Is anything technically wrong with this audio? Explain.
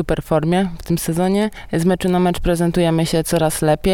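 No, nothing stood out as technically wrong on listening.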